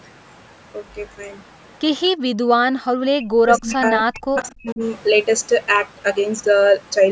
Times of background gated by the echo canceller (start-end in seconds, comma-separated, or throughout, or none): 2.73-2.83